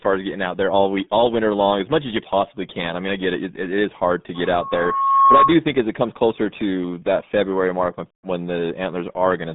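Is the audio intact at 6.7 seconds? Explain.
No, not at 6.7 seconds. The whole clip carries RealAudio 14.4 codec damage, which fits an 8 kbit/s dial-up speech stream. It squeezes the speech into roughly 150 Hz to 3.6 kHz with nothing above 3.8 kHz, so it's muffled and gargly throughout.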